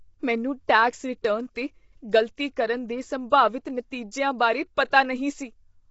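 Across the whole clip the speech has a rough, grainy texture, with noise filling the gaps between harmonics and nothing above 7.7 kHz. This points to a low bitrate around 24 kbps, likely from low-delay AAC compression such as AAC-ELD.

At 4.90 to 4.92 s a brief hiss of about 21 ms comes just ahead of a sharp attack, which sounds softened. This is pre-echo: noise sized for the loud onset spreads back through the quiet start of its transform block. Unlike a click or dropout, it leads the transient.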